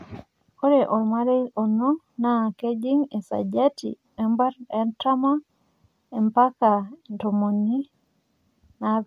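A speech recording with no technical faults to report. Nothing in it needs a time or a cause.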